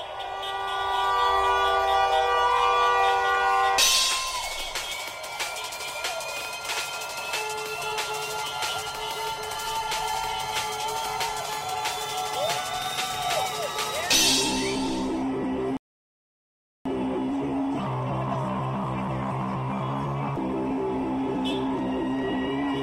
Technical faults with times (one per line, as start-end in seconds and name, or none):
15.77-16.86 rebuffering stall